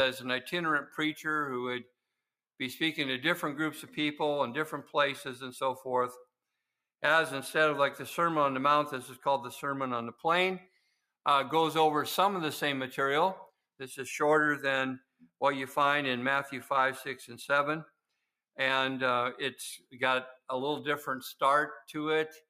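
Sound cut by the noise suppressor at 10.63 to 10.99 s and 14.98 to 15.31 s: the suppressor mistook parts of the audio for noise, pulling them down by about 18 dB and about 20 dB.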